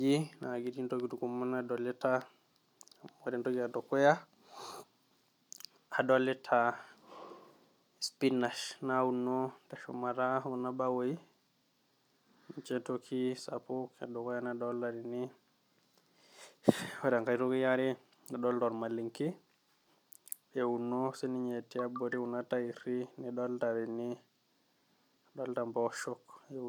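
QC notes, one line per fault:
No faults heard in this clip.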